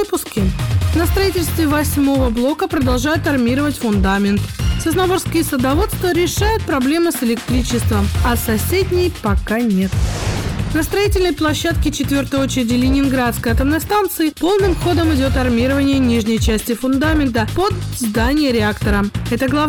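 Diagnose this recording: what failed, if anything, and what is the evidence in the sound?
Hard clipping runs through the whole recording, from start to finish. The signal was driven about 6 dB past the ceiling of a converter or fixed-point format stage, so every peak is sliced flat. Around 7 percent of the waveform sits against that limit, and the squared-off tops spray harmonics far up the spectrum. The result is a harsh, gritty fuzz on each louder moment rather than occasional crackle. The fix is to lower the gain ahead of that stage.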